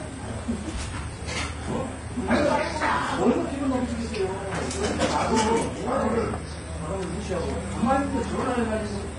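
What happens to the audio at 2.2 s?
At 2.2 s, as throughout the clip, the audio shows transcoding between lossy codecs. Nothing is present above about 10.6 kHz, and several kinds of compression artefact sit together. The likely cause is a chain in which each encoder re-spent bits on the previous one's errors and added its own. The result fits a very low-rate HE-AAC first pass, then Vorbis, then AAC-LC around 64 kbit/s, with the narrowest band limit carried through.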